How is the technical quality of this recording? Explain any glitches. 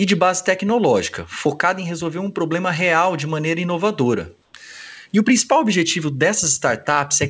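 There's one glitch worth flagging, heard over a call-codec path that stops at 8 kHz, consistent with G.722 at around 64 kbps. From 4.42 to 4.54 s, about 120 ms, comfort noise takes the place of the background: the real ambience gives way to a flat, featureless hiss about 3 dB quieter. Likely cause: discontinuous transmission, with the receiver synthesising filler noise during a pause.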